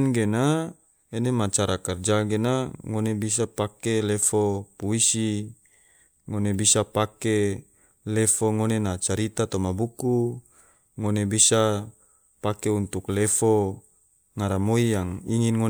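Listening to the speech recording, nothing stood out as a technical problem at any point.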